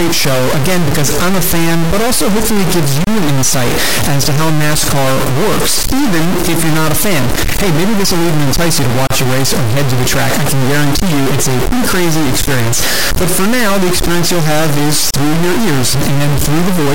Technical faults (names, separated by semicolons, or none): stuck bit; gap at a join of encoded pieces